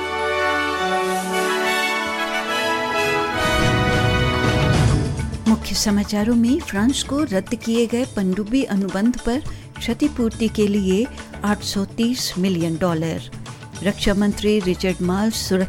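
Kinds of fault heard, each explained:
CD scratch ticks: A blemish on the disc wipes out more data than error correction can rebuild, and the damage recurs once per revolution, so the player patches or mutes the lost samples. Here three brief ticks fall between 11.25 and 11.53 s, about seven a second, the longest well under a millisecond. A waveform shows three tiny spikes or flat notches; a spectrogram shows three thin vertical broadband lines.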